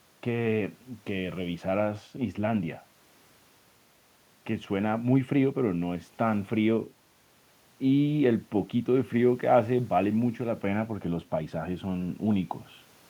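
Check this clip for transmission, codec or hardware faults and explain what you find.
No transmission, codec or hardware faults turn up in this clip.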